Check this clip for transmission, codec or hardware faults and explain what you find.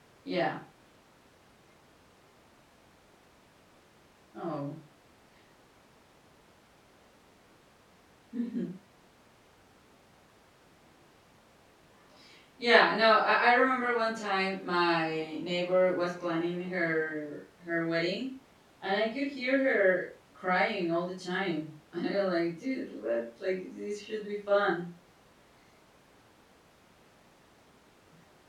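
No transmission, codec or hardware fault can be heard anywhere in the recording. The signal holds steady throughout, with nothing that points to trouble along the chain.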